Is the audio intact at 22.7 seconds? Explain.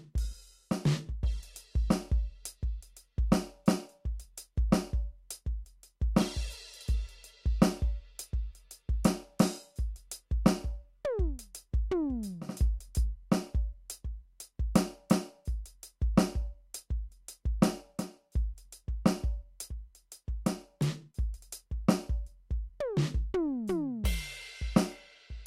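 Yes, the music at 22.7 seconds plays through intact, with no dropout, click, distortion or other fault at that point.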